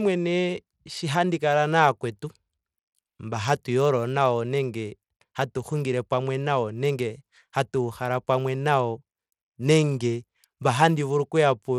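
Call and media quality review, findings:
Bluetooth SBC compression, throughout: speech treble flickers and drops out, with gritty noise and aliasing. Likely a small bit pool starving the upper sub-bands, consistent with about 96 kbps.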